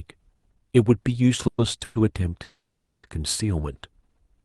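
Call audio freezes at 1.47–1.60 s, 1.84–1.97 s and 2.43–3.05 s: a fading buzz shows as smeared horizontal bands, the last sinking into flat silence, likely from jitter-buffer underrun.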